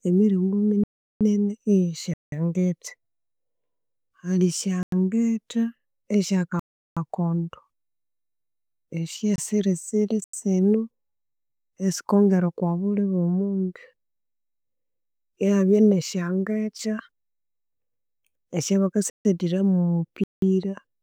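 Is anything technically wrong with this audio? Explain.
Yes. The speech has eight blocks of digital silence, at 0.84–1.21, 2.14–2.32, 4.83–4.92, 6.60–6.97, 9.36–9.38, 10.24–10.33, 19.10–19.25 and 20.24–20.42 s. They last from 24 to 372 ms. Most lengths fit buffers of 4096, 8192 or 16384 samples that went unfilled and were output as zeros. Each gap cuts abruptly to true silence. That sets it apart from a faded dropout or a concealed packet loss.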